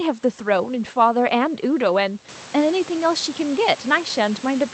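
No technical faults are present in the speech: the room's background noise rises by about 13 dB at roughly two and a half seconds yet stays about 19 dB below the speech, and the call path's Opus coding tops the audible band out at 8 kHz.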